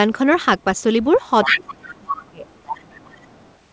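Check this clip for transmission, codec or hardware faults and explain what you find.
Two echo-related faults appear in this speech clip, which is band-limited at 8 kHz, consistent with a wideband call codec such as G.722.

Other side's voice leaking through occurs at 1.13 to 1.19 s, 1.43 to 1.6 s and 2.46 to 3.55 s. A second voice sits under the talker, likely residual loudspeaker echo the canceller failed to subtract. It is faint in the first and last stretches and nearly as loud as the talker around 1.5 s.

Speech suppressed in double talk runs from 1.45 to 2.45 s, a full second. The talker's level falls sharply, by as much as roughly 30 dB, while the other side is speaking, likely because the echo canceller could not separate near speech from echo and attenuated both.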